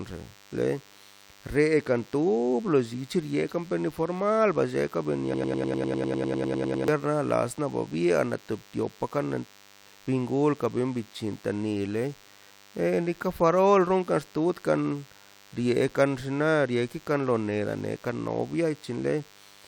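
A DECT cordless phone buzz runs under the speech for the whole clip: a thin, steady buzz at 100 Hz, thick with harmonics, sitting around 30 dB below the voice. A DECT handset or base nearby transmits a radio burst every 10 ms, and the audio circuitry rectifies it into sound. Unlike mains hum at 50 or 60 Hz, which is smooth and rounded, this has a hard, raspy edge, and its pitch never shifts with the power supply.

From 5.34 s to 6.88 s there is a broken-record loop: a fragment about 100 ms long repeats exactly, back to back, 15 times, turning the speech into a rapid mechanical stutter. The likely cause is a player, encoder or stream that stalled and kept outputting the last piece it held, so the speech that belonged in those 1.5 seconds is lost. What separates this from a natural stammer or an echo is that each repeat is identical and does not decay.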